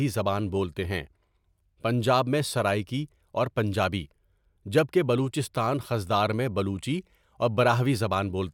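Nothing in the recording stood out as a technical fault on listening.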